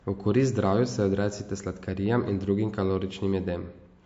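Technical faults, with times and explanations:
Throughout, MP3 compression: audible damage and nothing above 7.6 kHz. Treble is cut and weak detail zeroed, likely from an MP3 encode around 48 kbps.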